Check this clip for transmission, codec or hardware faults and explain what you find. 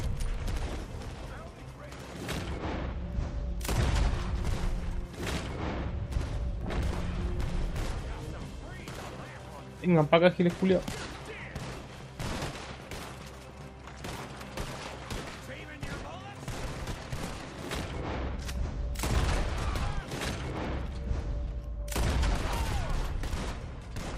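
No transmission, codec or hardware faults.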